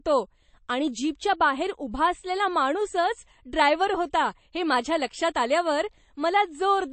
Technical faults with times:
0.00-6.93 MP3 compression

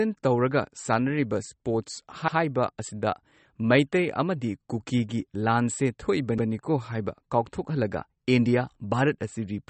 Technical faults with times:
0.00-9.70 MP3 compression
6.38-6.48 overlapping chunks

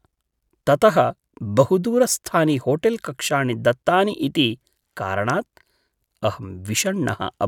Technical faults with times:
none

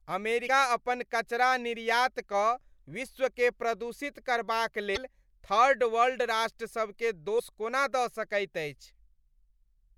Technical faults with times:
0.45-0.48 damaged data in a compressed stream
4.93-4.97 damaged data in a compressed stream
7.36-7.40 damaged data in a compressed stream

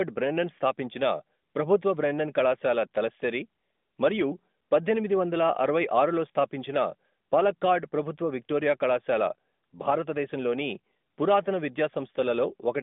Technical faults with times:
none

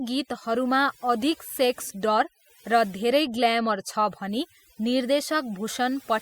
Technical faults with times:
0.00-6.21 overdone noise removal

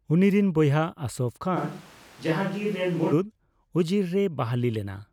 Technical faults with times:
1.58-3.11 switch to a distant microphone

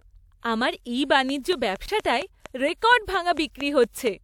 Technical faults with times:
1.29-4.08 train of clicks
1.86-1.88 block of digital silence

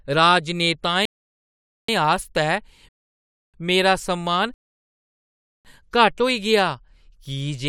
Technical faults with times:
1.05-1.88 rebuffering stall
2.89-3.54 rebuffering stall
4.54-5.65 rebuffering stall

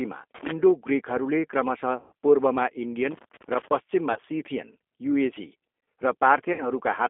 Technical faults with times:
0.00-7.09 G.729 codec
2.00-2.12 VoIP packet loss concealed by the speech codec
4.13-4.19 VoIP packet loss concealed by the speech codec
6.53-6.66 VoIP packet loss concealed by the speech codec

